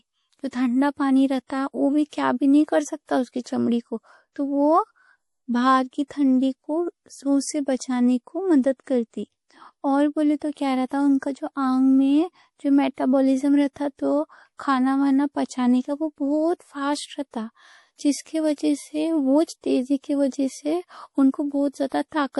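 A speech recording with plainly audible MP3 compression damage running its whole length. Nothing survives above 11.5 kHz, and the sibilants and consonant edges have a watery, swirling quality, which fits a low bitrate of around 48 kbps. The likely cause is an encoder short of bits discarding the treble and dropping weaker frequency lines that flicker in and out between frames. A spectrogram would show a flat ceiling at 11.5 kHz and patchy, blinking holes in the upper bands.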